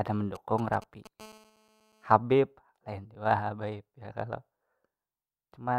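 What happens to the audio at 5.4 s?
Nothing goes wrong at 5.4 s; the speech continues intact there, with no dropout, click, distortion or other fault at that point.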